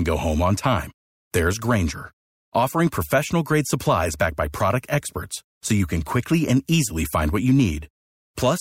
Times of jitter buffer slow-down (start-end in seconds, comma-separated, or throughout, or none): none